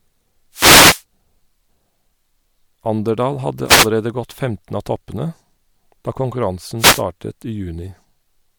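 The radio link of an analogue FM wireless microphone fades three times as reflected signals cancel the direct one, so receiver noise rises over the speech. Each wireless microphone noise hit sounds like a short swish of static: from 0.52 to 1.03 s, the longest at about half a second, then from 3.66 to 3.88 s, and again from 6.78 to 7.02 s, both close to a quarter of a second.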